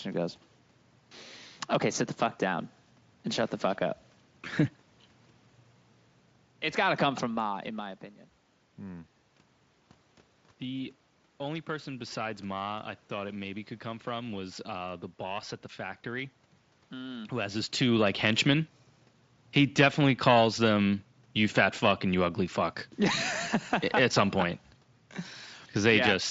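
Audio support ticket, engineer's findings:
Nothing stood out on listening, so there are no findings to log against this recording.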